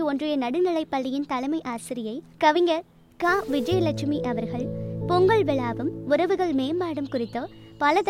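From 3.24 to 3.74 s there's a half-second burst of gritty distortion riding on the sound, and it doesn't fade where the level drops. That points to a stuck bit, most likely a converter or data line holding one bit fixed. Every sample where that bit should differ gets shoved by a fixed step of about -45 dBFS, so the error tracks the waveform and fills the quiet moments with a rough noise.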